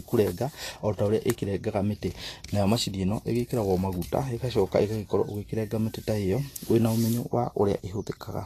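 A speech recording with Vorbis compression damage throughout. Nothing sounds above 14.2 kHz. The treble is hissy and grainy, and consonant attacks blur. The damage is plainly audible, which fits a low bitrate of around 37 kbps, likely from lossy Vorbis encoding.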